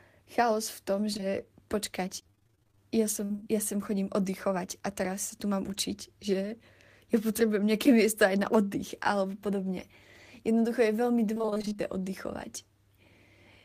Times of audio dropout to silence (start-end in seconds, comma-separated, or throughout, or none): none